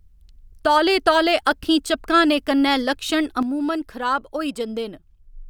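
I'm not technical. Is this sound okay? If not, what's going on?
No. One channel drops out, likely through a lost stereo channel, from 3.43 s to the end, right after "कन्नै लक्षण", so the speech abruptly becomes noticeably quieter.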